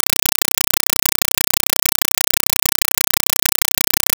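From the first moment to the end, the speech is replaced entirely by a compressed stream played as audio. An AC-3 bitstream, which fits a 256 kbps encoding, reaches the output as if it were raw samples, so each frame comes out as a burst of noise about 5.3 ms long followed by silent padding, repeating 31.25 times a second. Unlike broadband noise or heavy clipping, this is a loud, rhythmic chattering static with no trace of the speech underneath.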